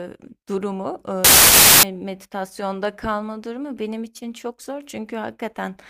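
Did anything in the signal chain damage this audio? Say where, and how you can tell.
Yes. A wrong sample width fault appears at the sample-format conversion stage, from 1.25 to 1.83 s. Loud, harsh noise suddenly swamps the speech, which remains faintly audible underneath, slowed to 0.75 times its speed with a matching drop in pitch. This fits 32-bit samples being read as packed 24-bit ones. The byte boundaries drift out of alignment, so most values combine bytes from neighbouring samples and only some keep the signal's top bits.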